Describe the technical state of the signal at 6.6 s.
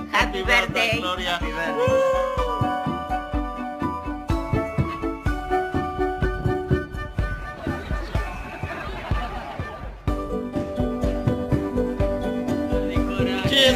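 At 6.6 s the signal carries crude rate conversion, present across the whole clip. The grit points to a 48 kHz to 44.1 kHz change made by simply dropping samples, with no filter. The regular pattern of skipped samples creates inharmonic tones, heard as a fizzy buzz about 25 dB below the signal. Unlike quantisation noise, it is not a steady hiss: it rises and falls with loud, bright content.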